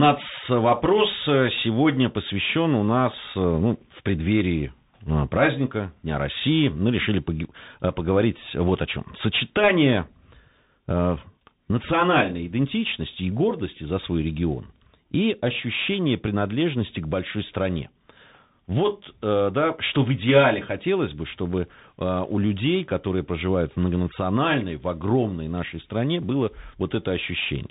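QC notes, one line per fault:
Throughout, Bluetooth CVSD headset codec: the speech has plainly audible codec damage and nothing above 3.8 kHz. A one-bit delta coder with an adaptive step, running at a rate that fits 64 kbps, can't track fast, loud, high sounds. On a spectrogram, everything stops at a flat ceiling near 3.8 kHz.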